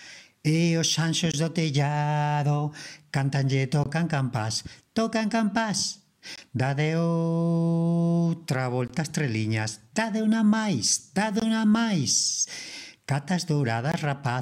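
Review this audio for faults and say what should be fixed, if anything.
There's a gap between chunks running through the whole thing: six short dropouts at 1.32–1.34, 3.84–3.86, 6.36–6.38, 8.88–8.90, 11.40–11.42 and 13.92–13.94 s, each about 20 ms of silence. They land every 2.52 s, which is a 2.5 s chunk plus the gap, so the audio was handled in 2.5 s pieces and a bit of silence got left at every join. Nothing's missing, it's just chopped. Join the chunks sample-accurately, with any codec padding trimmed and playback scheduled gaplessly.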